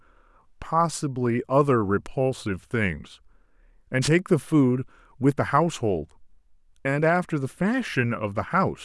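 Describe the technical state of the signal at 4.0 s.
The wireless microphone's FM radio link fades as reflections cancel, so receiver noise surges: a wireless microphone noise hit from 4.01 to 4.09 s, a brief swish of static over the speech.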